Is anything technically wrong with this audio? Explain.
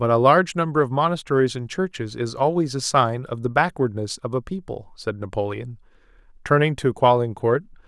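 No, nothing technically wrong can be heard here.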